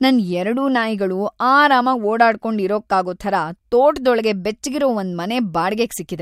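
No technical faults can be heard anywhere in the recording.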